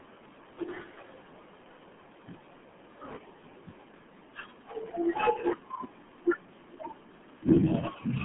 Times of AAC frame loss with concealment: none

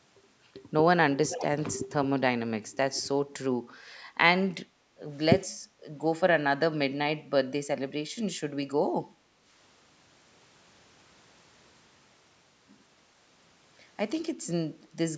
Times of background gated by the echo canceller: 4.70-5.00, 5.55-5.85, 9.08-9.45

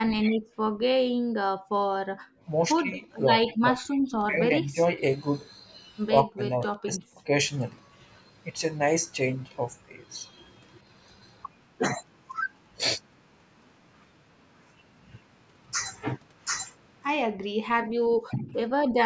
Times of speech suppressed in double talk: 2.82-4.97, 6.23-7.29, 18.30-18.54

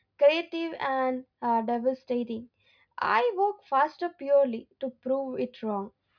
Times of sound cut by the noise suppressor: none

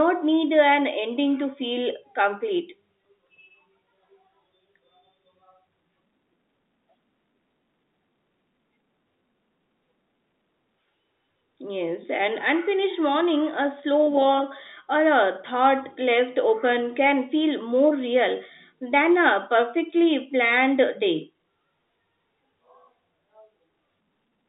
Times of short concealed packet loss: none

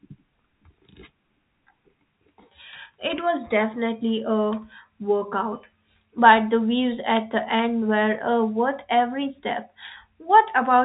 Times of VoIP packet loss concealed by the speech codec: none

